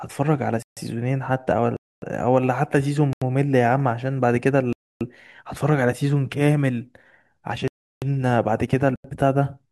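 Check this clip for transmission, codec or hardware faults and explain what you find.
The speech has six blocks of digital silence, at 0.62–0.77, 1.77–2.02, 3.13–3.22, 4.73–5.01, 7.68–8.02 and 8.96–9.04 s, lasting 85 to 341 ms. Zeros replace the samples when the output buffer isn't filled in time. The 85 ms gaps fit a 4096-sample buffer at 48 kHz. Each is a short hole. The hard cut to silence, with no fade and no smeared or repeated sound, separates it from concealed packet loss.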